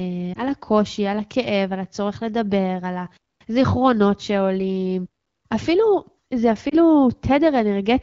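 Lost AMR speech frames occur at 0.33 to 0.40 s and at 6.69 to 6.76 s, each a single 20 ms frame that failed its checksum. The decoder bridged each gap with the last good pitch and vocal tract settings at falling gain, giving a brief dip or warble.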